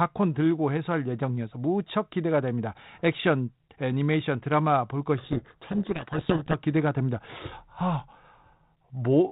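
From 5.18 to 6.58 s there's a codec payload misread: the G.726 code words arrive in the wrong bit order, so the 32 kbit/s decoder buries the speech in harsh distortion.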